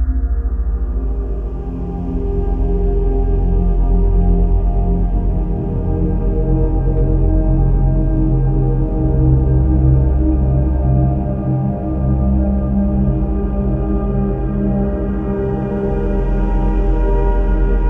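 No technical faults can be heard anywhere in the recording; the signal stays steady and intact throughout.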